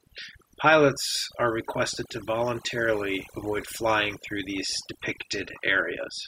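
From start to finish the speech carries overdone noise removal: a noise reduction stage pushed too hard, cutting individual frequency bands deeply whenever their level sat near its noise estimate, taking the quieter parts of the voice along with the noise. The background drops and breaks up into twinkling specks. A spectrogram shows isolated, flickering time-frequency dots in the gaps and ragged, hollowed-out harmonics.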